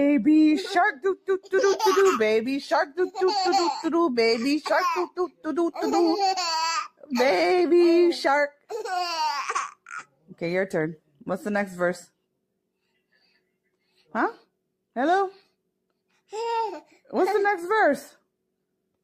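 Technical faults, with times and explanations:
0.92–1.53 s, 2.85–3.16 s and 5.07–5.46 s: sound cut by the noise suppressor. The suppressor mistook sound for noise. It dipped by up to about 12 dB for a few tenths of a second.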